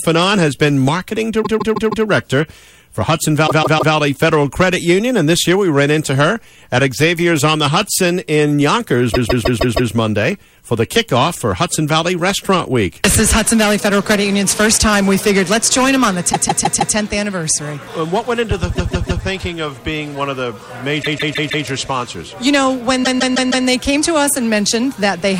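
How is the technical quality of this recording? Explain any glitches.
Rough in seven spots, all repeated frames. At 1.43, 3.46, 9.13, 16.32, 18.74, 21.02 and 23.03 s, the same block of about 157 ms (consistent with a run of roughly six compressed frames) loops three to five extra times. Each repeat is heard as a stutter and stretches the audio by 0.47 to 0.78 s.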